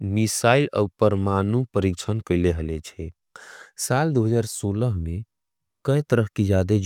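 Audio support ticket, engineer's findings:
No faults found in clip.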